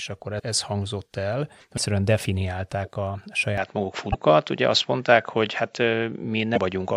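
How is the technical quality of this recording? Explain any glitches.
The recording has audible faults: four short glitches and a loss of brightness partway through.

Broken MP3 bit reservoir: brief glitches at 0.38, 1.77, 4.12 and 6.55 s, each about 30 ms. The first sits just before "ez hangzott el", the second just before "definiálták a". The likely cause is that 26.1 ms frames went missing, so later frames read the wrong data.

Input switched to a poorer device: from 3.58 s, after "definiálták a", nothing sounds above 7.6 kHz, and faint new background noise appears. There is no gap and no level jump. It likely switched microphones.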